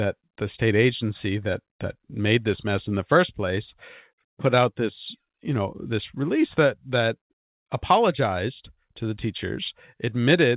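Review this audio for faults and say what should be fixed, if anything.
Nothing in the speech needs fixing. It has come through a WebRTC call path with nothing above 4 kHz, the narrowband sound that fits G.711 mu-law at 64 kbps.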